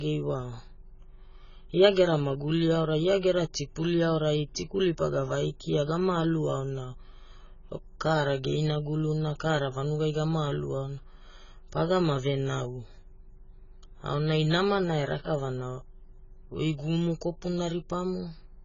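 AAC compression damage runs through the whole of this speech recording, from start to finish, and the heavy degradation points to an AAC-LC encode at a very low bitrate, around 16 kbps. Nothing survives above 7 kHz, so the sound is dull and lacks air. The encoder has likely starved the spectrum of bits, leaving gaps that smear detail, with a fizzy, warbling texture on sibilants and sustained sounds.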